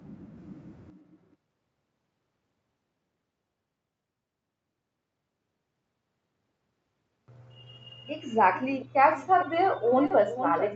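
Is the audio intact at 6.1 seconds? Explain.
Yes, the speech at 6.1 seconds is intact, with nothing at that moment beyond the band-limited sound of a normal call path.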